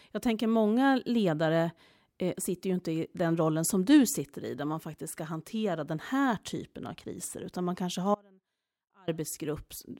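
From 8.15 to 9.08 s, an audio dropout to a faint residue: the speech cuts abruptly to a faint leak far below normal level, not a pause or fade, likely signal lost on a still-live path.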